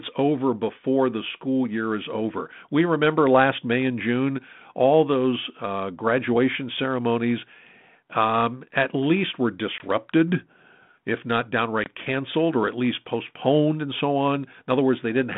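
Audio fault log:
9.78–9.85 s and 11.84–11.90 s, packet loss on an ADPCM call: a sharp-edged gap after "um at least were" and between "if not" and "canceled or at least", then brief distortion as the speech returns. About 20 ms drops out each time, roughly one packet. The decoder's adaptive predictor and step size lose track of the sender's and take some tens of milliseconds to recover, which fits a 32 kbit/s G.726 link.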